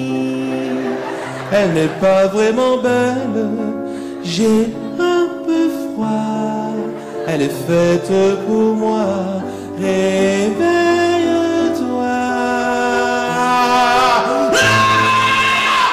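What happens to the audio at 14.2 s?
At 14.2 s you're hearing hard clipping, which runs through the whole clip: peaks pushed about 7 dB past the limit get sliced flat, so a few percent of samples crackle harshly.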